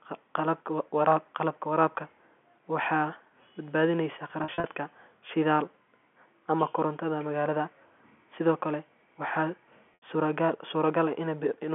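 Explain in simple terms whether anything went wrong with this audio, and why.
Packet loss with pitch repetition, at 4.44 to 4.64 s and again at 9.94 to 10.02 s. Pieces of the speech were lost in transit, and the receiver filled each gap by replaying the last pitch cycle. The first spot has several gaps up to 40 ms, and the second one is about 80 ms. The first sounds briefly held and buzzy, while the second fades into silence before the speech returns.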